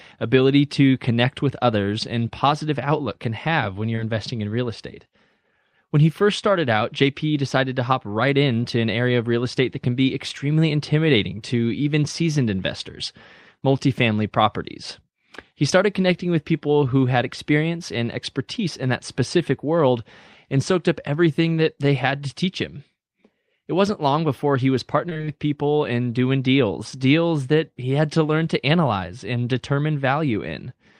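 A speech clip with two network faults. At 3.95 to 3.99 s, between "outlook can have when" and "investing in real estate", short concealed packet loss leaves a brief smear where about 20 ms was patched. From 25.09 to 25.29 s, after "long before he was", repeated packet loss sounds choppy and robotic. Several short gaps, the longest 26 ms, are filled in, covering about half the stretch.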